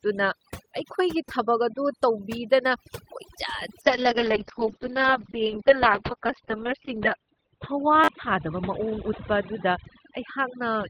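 Throughout this speech recording the background sinks to near silence dotted with twinkling specks. That is overdone noise removal: a noise reducer set too hard switches off individual frequency bands wherever they approach its noise estimate, and the quieter parts of the voice vanish with the noise. From 3.82 s to the end the sound turns rough and muffled, with the highs gone above 4 kHz where they previously reached 20 kHz. This is a call bitrate drop. A falling bandwidth estimate pushed the encoder to far fewer bits, roughly what a fall from 32 to 7 kbps would give, and the coarsest stretch lasts about 3.2 s. At 8.04 to 8.08 s a brief buzzy stutter appears as one tiny slice plays several times with hard joins. That is a repeated buffer: fresh audio arrived late, so the device replayed its last buffer, which fits a 10 ms buffer, and a few tens of milliseconds of audio are lost.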